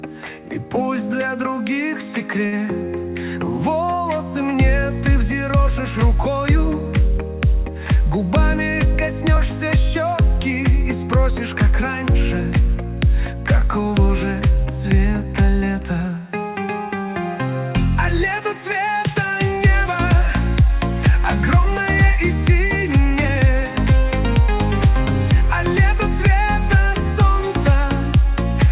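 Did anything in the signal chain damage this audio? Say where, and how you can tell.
Yes. Short stall from a late packet at 2.46 to 2.54 s, at the network and jitter-buffer stage. A packet arrived late and the buffer ran dry, so the receiver stretched the last sound for 58 ms and then resumed where it left off. The sound hangs briefly, but nothing is lost.

Jitter buffer speed-up from 8.17 to 8.95 s, at the same stage. Too much audio had queued up, so the receiver repeatedly cut short pitch-period pieces, removing roughly 50 ms in total. Playback runs at 105% speed with unchanged pitch and sounds hurried.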